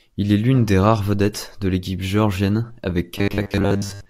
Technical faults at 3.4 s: robotic sound from repeated short buffers

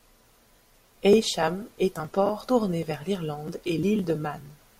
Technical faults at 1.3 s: none

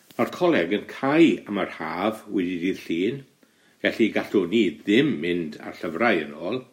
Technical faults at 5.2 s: none

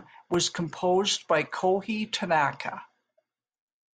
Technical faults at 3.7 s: none

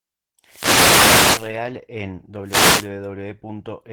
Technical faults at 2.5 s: Opus voice compression; wireless microphone noise hit

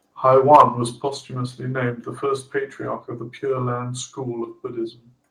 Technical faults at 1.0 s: microphone volume stepped down

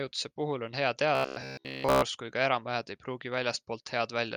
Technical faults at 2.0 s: robotic sound from repeated short buffers

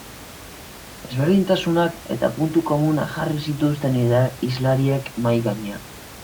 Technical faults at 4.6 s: none

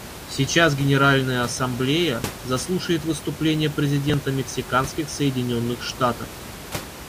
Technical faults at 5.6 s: none

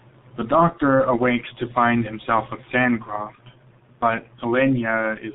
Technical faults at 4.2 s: G.723.1 codec

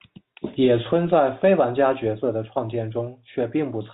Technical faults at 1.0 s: none

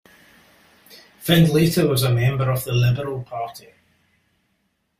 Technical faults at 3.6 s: none

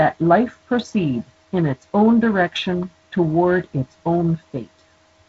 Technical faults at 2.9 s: none

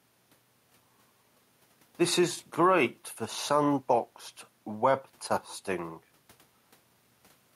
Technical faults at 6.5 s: none

